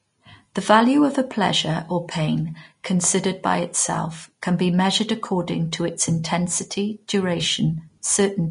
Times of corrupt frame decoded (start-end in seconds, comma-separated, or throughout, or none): none